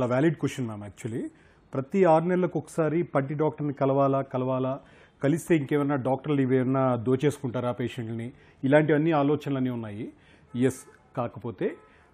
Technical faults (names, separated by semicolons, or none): none